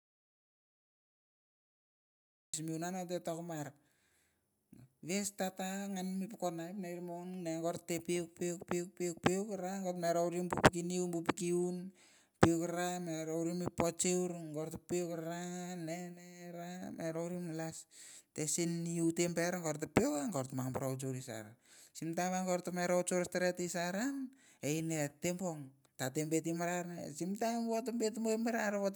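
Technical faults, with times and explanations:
0.00–2.54 s, audio dropout to silence: the input was most likely lost, through a disconnected source, a broken link or a mute left engaged, while the recorder kept writing silence, so the clip opens already in the gap. For its first 2.54 seconds there is silence with no room tone or hiss at all, and the speech then starts abruptly mid-flow. Whatever was spoken during that span is missing from the recording.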